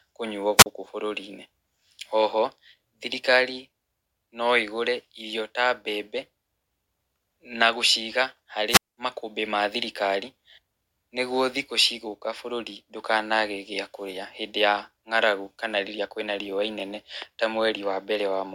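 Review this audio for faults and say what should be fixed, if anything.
Wireless microphone squelch dropout at 0.57–0.66 s (40 ms mute) and 8.68–8.97 s (205 ms mute): the radio signal fades, hiss rises, and the receiver's squelch cuts the speech. To prevent it, keep line of sight to the receiver and check antenna placement and frequency before recording.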